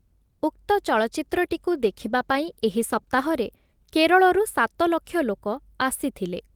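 Speech, with a call bitrate drop from 1.29 to 3.43 s. The sound turns rough and watery, then clears. The quality fits the encoder falling from roughly 32 kbps to 18 kbps for about 2.1 s after a drop in the call's bandwidth estimate, so it codes each frame more coarsely. On a spectrogram, that stretch shows a thinner, blotchier upper band and smeared harmonic detail. The waveform's envelope barely changes.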